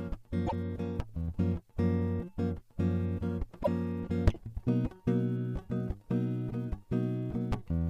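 Music with repeated frames at 0.46 s and 3.62 s: a single 26.1 ms block, likely one compressed frame, plays twice, causing a brief stutter, not a gap like a dropout.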